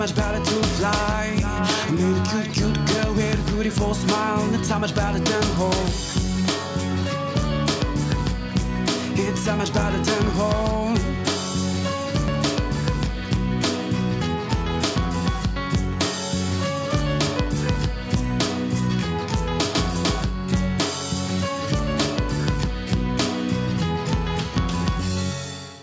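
Nothing here stands out as a fault, just the usual call microphone processing trimming away the deepest bass and leaving nothing above about 8 kHz.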